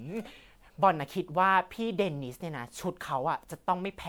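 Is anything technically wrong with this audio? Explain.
Yes. Throughout the speech there is generation loss: the swirly, hollow smearing and blurred consonant onsets go beyond what one pass at around 128 kbit/s would leave, pointing to MP3 likely re-encoded about five times, each pass adding fresh quantisation noise and spectral holes on a shifted frame grid.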